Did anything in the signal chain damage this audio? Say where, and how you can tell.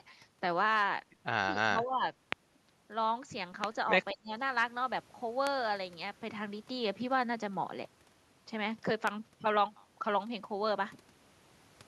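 Yes. In the call processing stage, the echo canceller likely mistook double talk for its own loudspeaker echo and turned the near-end talker down along with it. The speech dips by about 15 dB from 1.48 to 2.03 s, and by about 25 dB from 4.13 to 4.32 s.

Loud pops come from the analogue wiring or driver stage: a sudden voltage step or pulse, likely from a plug, switch, static or driver glitch, was added to the signal. Single sharp pops about 20 ms long land at 2.32, 3.64, 5.47 and 9.07 s, about 20 to 25 dB above the speech, which continues underneath.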